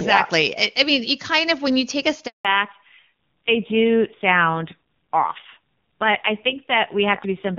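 At 2.27 s a handover gap cuts the speech out for 180 ms: the call switched networks and no frames arrived until 2.45 s. From 2.45 s onward the call falls back to narrowband, losing everything above 4 kHz, and the speech turns dull and rough, consistent with a low-rate AMR-NB mode near 5.9 kbit/s after clear wideband audio before the gap.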